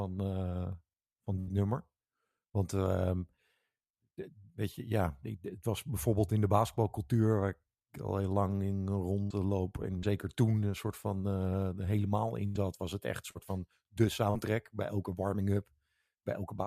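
Speech with a burst of packet loss at 1.39–1.50 s, 9.23–9.33 s and 12.46–12.58 s: about 80 ms failed to arrive each time, so the receiver extended and faded the last sound before jumping ahead. There is also short concealed packet loss at 9.98–10.06 s, 13.31–13.38 s and 14.31–14.37 s, where 40 ms gaps were patched from the preceding sound, leaving brief smears or wobbles.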